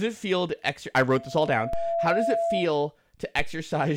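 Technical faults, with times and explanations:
1.08–2.79 s, loudspeaker feedback squeal: Just after "feel to ex I", the microphone starts picking up its own loudspeaker and the loop gain passes unity at 673 Hz. That tone feeds on itself, swelling over roughly a second into a steady squeal about as loud as the speech.
1.73 s and 3.39 s, DC step: The waveform's zero line jumps suddenly by an offset of about −22 dBFS, then bleeds away as a high-pass around 2 Hz pulls it back to centre. Each jump is heard as a low thump, while the speech carries on unchanged.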